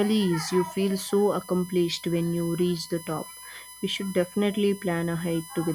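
Throughout the speech, current drawn by the USB bus in 1 ms frames leaks into the audio through the power or ground, producing USB whine: a steady, fixed-pitch tone at 1 kHz with a ladder of harmonics, loudest at 11 kHz, sitting roughly 20 dB below the speech.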